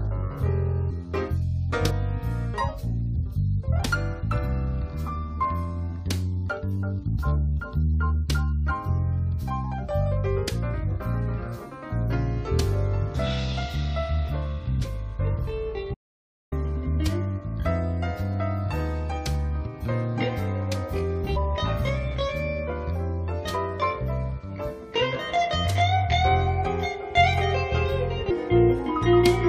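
The audio jumps forward at 0.89, 1.89, 21.35 and 28.29 s, where compressed frames were skipped. Each jump drops roughly 200, 150, 200 and 300 ms, consistent with frames of about 23 ms. An audio dropout to silence runs from 15.94 to 16.52 s. The sound cuts to dead silence for about 0.58 s, likely because the input was lost.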